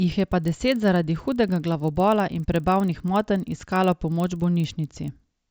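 Speech throughout carries a steady 25 Hz tick from a resampler restarted on every block: each 40 ms block was converted from 16 kHz to 48 kHz in isolation. Unlike irregular dropout clicks, the ticks are perfectly periodic and vanish whenever the speech pauses.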